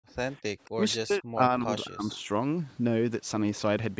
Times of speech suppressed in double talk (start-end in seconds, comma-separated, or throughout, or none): 0.00-0.08, 0.65-2.27